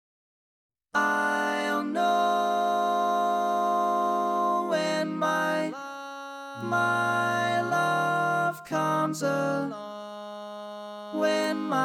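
At 6.61 s a single sharp tick cuts through the sound. It is a bit error spike. One sample jumps to about -30 dBFS and drops straight back. A flipped bit in memory or on a digital link causes this. The tick has no pitch and bears no relation to the surrounding audio. It returns at 7.84 s, louder at about -24 dBFS. The loudest comes at 11.44 s, near -18 dBFS. Each lasts just one sample.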